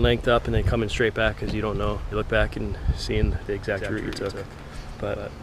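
At 2.11 s there is a skip ahead: playback jumps forward with no gap and about a second of audio is missing. The discarded stretch was dropped while later material was already queued, so the audio on either side of the cut is joined almost directly.

From 2.22 to 3.46 s there is a jitter buffer speed-up. The receiver trims short pitch-period slices repeatedly to shed excess buffered delay, removing roughly 50 ms in total. Playback runs at 104% speed with unchanged pitch.

At 3.70 s a doubled audio track begins and continues to the end. A full-band copy trails the original by roughly 150 ms at about 5 dB lower level, with no decay or room colouring, and it switches in abruptly. The likely cause is a second, slower capture path mixed in.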